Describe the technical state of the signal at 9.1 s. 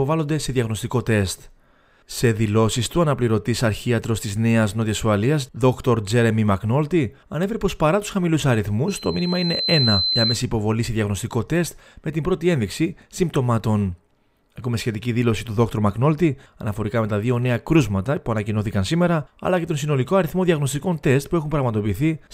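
9.1 s lands in a loudspeaker feedback squeal (8.88–10.44 s): the mic hears its own speaker, so a 4.1 kHz tone swells over a second or so, peaking about 5 dB above the sound.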